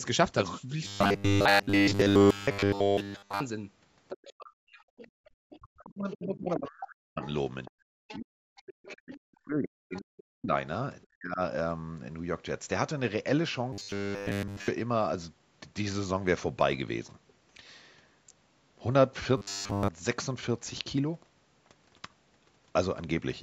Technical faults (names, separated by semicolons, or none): robotic sound from repeated short buffers; other side's voice leaking through; speech suppressed in double talk; background gated by the echo canceller